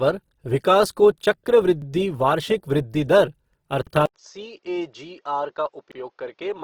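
Throughout, the speech sounds grainy and rough, with tones turned noisy. That is Opus compression, likely in its CELT music mode, and the damage fits a bitrate around 16 kbps.

At 1.82 s, 3.87 s just after "वृद्धि दर", and 5.92 s, a 48 ms slice plays twice and stutters. These overlapping chunks recur every 2.0 s, each one restarting before the previous one finished.

At 4.06 s, an 80 ms silence gives way to duller audio about 10 dB quieter, with nothing above 6.9 kHz and a faint new noise floor. This is likely the input switched to a poorer device.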